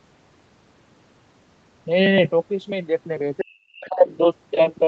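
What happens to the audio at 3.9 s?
Around 3.9 s the echo canceller is most likely struggling with both sides talking at once. Between 3.41 and 4.05 s, unable to tell the talker's speech from the loudspeaker echo, it turns everything down. This is speech suppressed in double talk: the talker's speech dips sharply, by as much as roughly 40 dB at its deepest, with the affected stretches adding up to about half a second.

Right at this moment, from 3.86 to 3.90 s, the other side's voice leaks through. The far-end audio playing on the talker's loudspeaker was probably not fully removed from the microphone signal. It comes through as a brief scrap, well below the talker's speech level, roughly 25 dB quieter.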